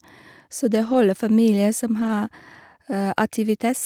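Two brief rough, grainier patches in the speech, from 0.85 to 0.95 s just before "familier som" and from 1.99 to 2.09 s right after it, are lost packets rebuilt from error correction. Each holds about 60 ms of audio, which fits three lost packets replayed from the lower-quality copies carried in the following packets, so there is no gap.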